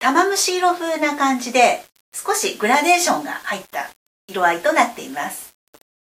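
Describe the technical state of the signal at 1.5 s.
At 1.5 s the signal shows low bit depth without dither, and this runs through the whole clip rather than starting there. The grain tracks the sound, which points to a likely cause of rounding to about 7 bits with no dither added. Because the error follows the waveform, quiet passages turn gritty and the faintest parts sputter or drop out. The distortion sits roughly 30 dB below the signal.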